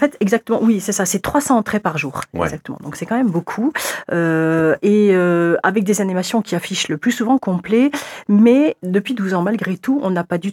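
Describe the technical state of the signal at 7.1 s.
The signal is intact at 7.1 s, with no audible fault at that point.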